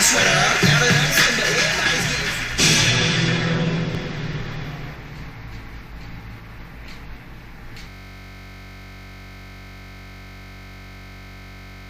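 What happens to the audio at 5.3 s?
Nothing goes wrong at 5.3 s; the audio plays through that moment intact, with no dropout, click or distortion.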